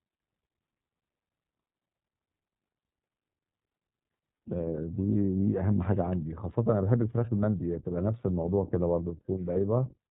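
Throughout the speech the iLBC codec leaves plainly audible damage. Nothing above 4 kHz survives, so sibilants lose their hiss, and voiced sounds take on a rough, slightly synthetic grain. That grain fits iLBC's 15.2 kbps mode with 20 ms frames. A wideband codec would keep the upper band, and simple low-pass filtering would not add this coarse texture.

From 9.54 to 9.57 s come lost iLBC frames, a gap that sounds like one 20 ms frame going missing. The decoder fills it by repeating the last pitch cycle blended with noise, so instead of silence or a click there is a brief held, faintly buzzy vowel-like tone. The speech sounds right again almost at once, because iLBC frames do not depend on earlier ones. Codecs that rely on earlier frames take longer to settle after a loss.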